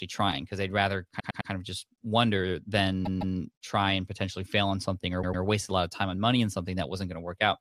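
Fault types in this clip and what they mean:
Repeated frames: a short run of compressed frames was written or sent more than once, so the decoder played the same stretch again. Here that is heard as a stutter three times. After "trying because they'd rather", a 104.5 ms block plays three extra times (1.19–1.50 s). After "of just wonder", a 156.7 ms block repeats twice (3.05–3.36 s). After "fail on something or", a 104.5 ms block repeats twice (5.21–5.42 s). Each repeat lengthens the speech by the replayed time.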